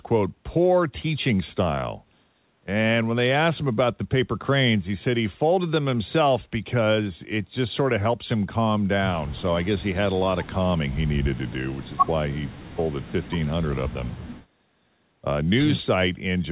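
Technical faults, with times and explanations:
No technical faults can be heard in this speech. The call path limits the sound to nothing above 4 kHz, the narrowband character expected of a phone-grade codec such as G.711 A-law.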